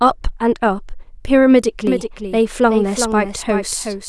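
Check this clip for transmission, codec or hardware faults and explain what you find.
One fault: a doubled audio track from 1.87 s to the end. The speech is heard twice, with a full-band copy trailing roughly 0.4 s behind and a few decibels quieter, likely from a second, slower capture path mixed back in. The copy cuts in abruptly and carries no reverb tail. On a spectrogram, every syllable's pattern reappears shifted right by a constant gap. In the waveform, the envelope shows a matching echo of each burst.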